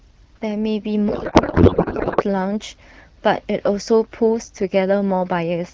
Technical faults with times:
1.09-2.23 codec payload misread

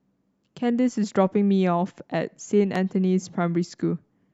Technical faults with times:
2.75-2.78 loud pop

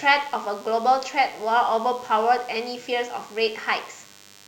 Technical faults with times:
0.00-4.47 DECT cordless phone buzz

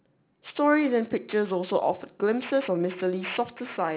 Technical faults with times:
0.00-3.96 aliasing

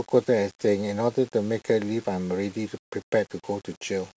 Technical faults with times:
none

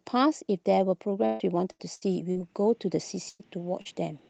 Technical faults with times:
1.25-2.37 repeated packet loss (robotic sound)
3.29-3.41 burst of packet loss
3.81-3.87 short concealed packet loss

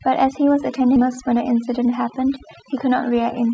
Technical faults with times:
0.00-3.53 overdone noise removal
0.96-0.98 skip ahead
1.05-2.20 jitter buffer speed-up

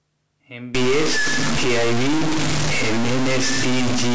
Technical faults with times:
0.75-4.15 stuck bit

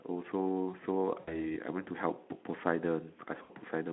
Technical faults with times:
1.20-1.56 VoIP packet loss concealed by the speech codec
3.44-3.51 VoIP packet loss concealed by the speech codec

